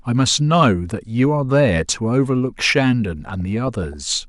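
Between 3.28 and 3.94 s there is DAB burbling: bit errors slip past error correction, putting short blips of noise into single sub-bands and making sub-bands jump in level where scale factors are hit, rather than the clean gaps of dropouts.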